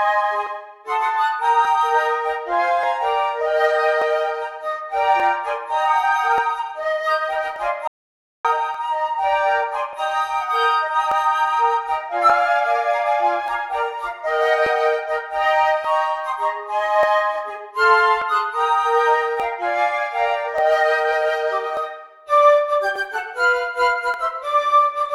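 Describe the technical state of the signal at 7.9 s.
At 7.9 s the input feeding the recorder has dropped out, most likely through a lost link or a stray mute, and silence was written in its place. This audio dropout to silence runs from 7.88 s to 8.45 s, about 570 ms, so the sound cuts off abruptly into dead silence with no room tone underneath, then resumes mid-flow. Whatever occurred during that gap is simply missing.

The moment also falls within a longer stretch, from 0.47 s to 24.14 s, in which two devices appear to be running on separate clocks that disagree by roughly 1000 ppm. The buffer between them likely drifts until a small block of samples, around 50, is dropped or repeated. These clock drift buffer slips recur every 1.19 s, about twenty times in all, and are heard as a regular click or pop wherever there is signal.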